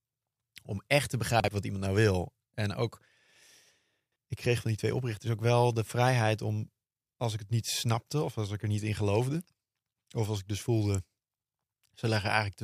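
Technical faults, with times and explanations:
1.40–1.48 s and 4.00–4.16 s, chunks out of order: 40 ms chunks play late, by one after "echt te" and by three before "ik kreeg van die". Jumbled sound at the hard joins.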